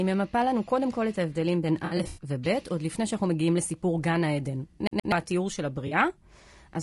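Speech runs throughout with a rough, grainy texture: noise fills the gaps between voice harmonics and the top band sounds thin and synthetic. That points to low-delay AAC compression, likely AAC-ELD at a low bitrate around 32 kbps. Unlike a single glitch, this damage is steady and never lets up. From 1.85 to 2.23 s the sound turns smeared and phasey in patches, with about 180 ms missing across 320 ms and the longest gap around 70 ms. A shorter patch of about 40 ms follows at 5.87 to 5.93 s. This is AAC frame loss with concealment: the decoder rebuilds the gaps from the last good spectrum, so it blurs rather than repeating anything exactly. By contrast, from 4.87 to 5.12 s the same 124 ms slice plays twice, with a tiny mute at each jump. This is the even stutter of a CD stuck on one turn, which repeats identical audio where concealment would smear it.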